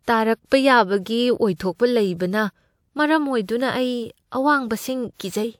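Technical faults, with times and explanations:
5.14–5.19 s, pre-echo: a 58 ms hiss precedes a sharp attack as block-wide codec noise leaks backward, showing as broadband haze before the spectrogram onset.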